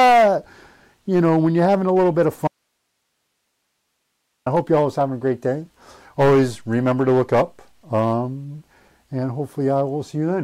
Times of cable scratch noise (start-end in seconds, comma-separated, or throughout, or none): none